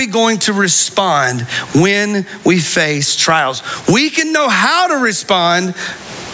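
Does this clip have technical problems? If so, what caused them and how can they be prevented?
Yes. Throughout the speech, the level swings by around 25 dB, which squashes loud and soft parts together. This is gain pumping, likely caused by the microphone gain being set far too high so that a fast limiter clamps down on every peak. There is also room noise, about 43 dB below the speech. Lowering the input gain until the limiter stays idle prevents it.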